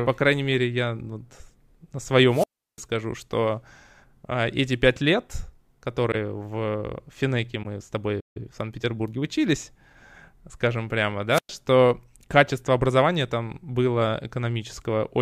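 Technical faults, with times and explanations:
2.29–2.83 s and 11.30–11.51 s, wireless microphone squelch dropout: hiss rises, then near-silence for about 345 ms and 108 ms, as the fading radio signal trips the receiver's squelch mute.
6.12–6.15 s and 7.62–7.65 s, corrupt frame concealed: a brief concealed stretch, one frame long, where the decoder detected damaged data and masked it instead of letting it squeak.
8.20–8.37 s, playback stall: the sound stops mid-flow for about 153 ms, likely because the player ran short of data before resuming.
8.37–9.37 s, time-compressed catch-up: speech runs hurried at 1.15 times speed with unchanged pitch, as small pieces are cut and cross-faded to clear the backlog.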